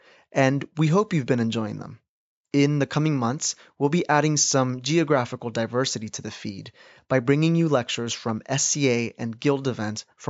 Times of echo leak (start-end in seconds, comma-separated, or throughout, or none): none